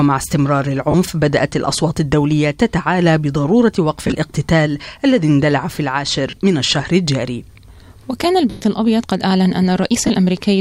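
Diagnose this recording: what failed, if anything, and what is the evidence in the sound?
Lost LE Audio frames on the Bluetooth link, concealed by the LC3 decoder. Gaps at 0.91, 6.30 and 10.07 s (30 ms each), scattered dropouts around 4.07 to 4.15 s, and 110 ms at 8.50 s become a noisy smear as the last spectrum repeats with random signs, fading out over the longest gap.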